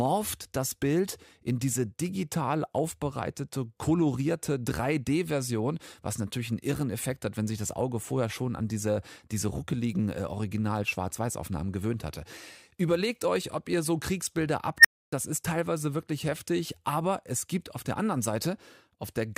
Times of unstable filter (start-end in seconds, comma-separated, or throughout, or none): 14.79-15.12